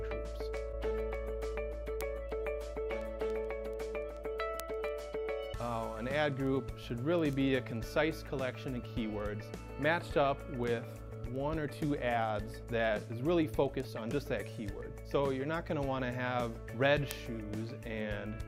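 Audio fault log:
0.14–18.41 s, word clock ticks: about 150 sharp ticks recur at a steady rate of roughly one every 0.15 s across nearly the whole clip. The receiving device is running on its own clock rather than locking to the sender's digital link, and the two rates differ by something like 150 parts per million. Each time they drift a full sample apart, a few samples are misread, and the discontinuity fits a single sample being dropped or repeated, which is heard as a tick.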